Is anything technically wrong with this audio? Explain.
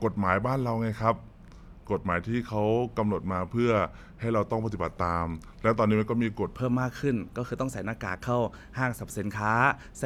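Yes. From 0.00 to 6.53 s there is a section at the wrong speed: the speech plays at 0.865 times its recorded rate, likely from a clock mismatch, sounding slow and about three semitones deep. On a spectrogram the harmonics sit lower and spread wider in time, then jump upward at 6.53 s.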